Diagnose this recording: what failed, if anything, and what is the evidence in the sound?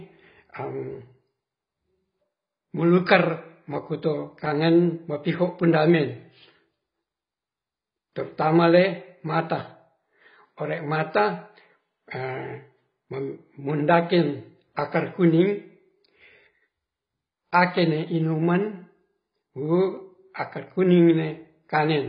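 The speech is dull and smeared throughout, with nothing above 5.6 kHz and a warbling, fizzy edge on sibilants. The fault lies in the codec stage, likely heavy AAC compression at a bitrate near 16 kbps, forcing a low cut-off and coarse quantisation.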